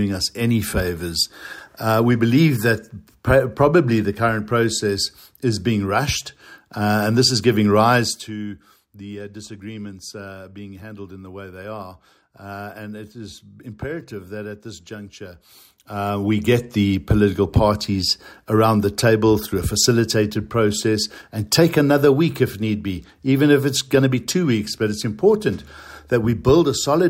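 Zipper noise at 7.96–8.34 s (a fall of about 15 dB in 1 dB steps) and 15.36–16.64 s (a rise of about 15 dB), stepped roughly fifty times a second. It shows as a staircase envelope and faint vertical ticks on a spectrogram.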